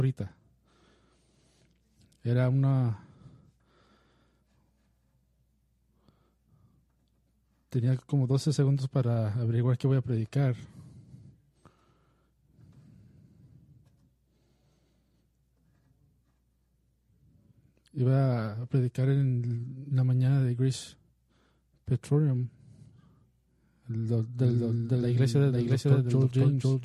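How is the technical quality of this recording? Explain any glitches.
One glitch affects the last stretch of the recording. From 24.39 s to the end, a doubled audio track appears, likely because a second, slower capture path mixed the sound in again. An equally loud, full-band copy trails about half a second behind and starts abruptly, with no decay or room colour.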